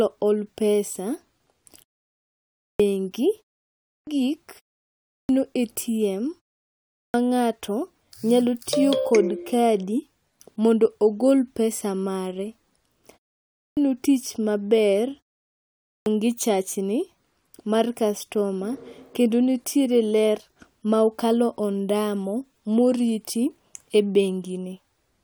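At 2.53, 3.81, 5.03, 6.88 (just before "ng'ato nyalo tiyo"), 13.52 and 15.82 s, the speech shows a clipped start after a pause. After each gap of about 0.4 to 0.8 s, the output device has gone idle and needs roughly a quarter second, 0.24 to 0.27 s, to wake, so each phrase begins abruptly without its opening sounds. This differs from muted pauses, which silence only the gaps and never cut into speech.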